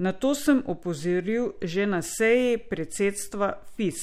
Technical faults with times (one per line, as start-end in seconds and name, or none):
none